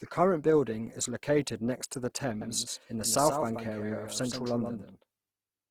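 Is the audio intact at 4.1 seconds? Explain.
No. A doubled audio track runs from 2.41 s, just after "located next to the", to the end: a second full-band copy trails by roughly 150 ms, a few decibels quieter, with no room colour, likely an out-of-step duplicate path. Opus compression is also present throughout, likely from the CELT music mode at a rate near 16 kbps, leaving the speech grainy and rough.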